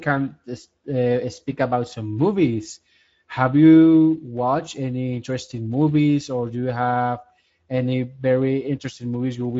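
Throughout the speech, Speex codec damage is plainly audible: with few bits left for the excitation, the voice comes out hoarse and noisy. The damage points to a bitrate near 17 kbps. On a spectrogram, energy stops flat at about 7.7 kHz.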